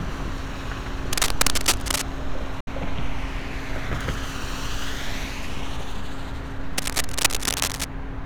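From 1.13 to 2.02 s, dense, uneven scratching and rustling sits over the everyday sound at roughly the same level as the sound itself. This cable scratch noise is likely a worn cable, connector or control being moved, its contact resistance jumping about rapidly.

At 2.60 s a digital broadcast dropout occurs. The receiver stopped getting usable frames and muted, fading out over about 3 ms and leaving a 64 ms hole until 2.68 s. That length fits two lost frames, and whatever was sent during that time is gone.

The same scratching returns from 6.78 to 7.86 s, again at roughly the level of the sound.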